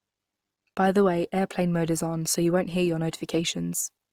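Across the whole speech clip, the signal has likely passed through Opus compression in its music-oriented CELT mode, at a low rate that fits roughly 24 kbps. With too few bits to code each band faithfully, the encoder fills gaps with folded or noise-like content. The result is plainly audible: voiced sounds come out rough and grainy rather than clean, though the bandwidth stays full, reaching about 20.5 kHz.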